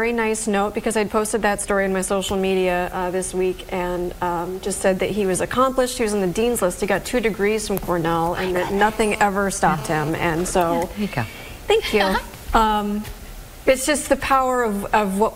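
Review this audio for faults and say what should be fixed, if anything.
A nearby 2G handset, busy with a data transfer, sent radio bursts 216.7 times a second, and the audio circuit rectified them. The result is GSM phone buzz from 8.79 to 10.10 s: a hard, raspy 217 Hz tone rich in harmonics, about 14 dB below the sound. Keep phones away from the recording chain or in flight mode, and use shielded, well-grounded cabling.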